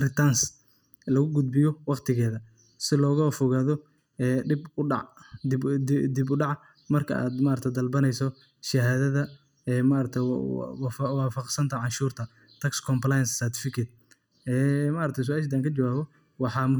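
Throughout the speech, channel delay (comb filtering) gives a hollow, phasey tone. One channel lags the other by under a millisecond, so mono summing cancels evenly spaced frequencies from around 700 Hz upward. A spectrogram shows fixed, regularly spaced dark horizontal notch bands.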